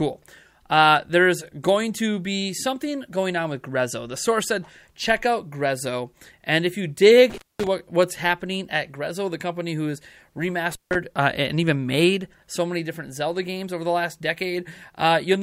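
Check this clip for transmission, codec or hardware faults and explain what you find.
Two hardware dropouts are audible, both from intermittent contact. The first spans 7.30 to 7.67 s, with the signal gone for about 0.22 s; the second spans 10.71 to 10.95 s, with a gap of about 0.16 s. A loose plug or cable conductor briefly loses connection, so the audio cuts out abruptly, with crackle where the contact breaks and remakes, and faint hiss remains while the circuit is open.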